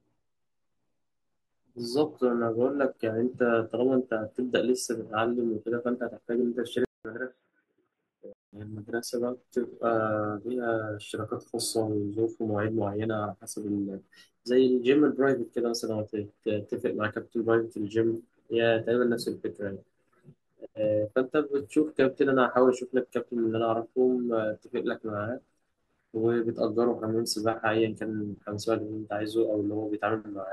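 At 6.85 s the speech goes silent for 200 ms, then returns about 10 dB quieter, boxy, with nothing above 3.8 kHz and a faint new noise floor until 8.53 s. This likely reflects the input switching to a poorer device; the changed noise floor separates it from a simple low-pass filter.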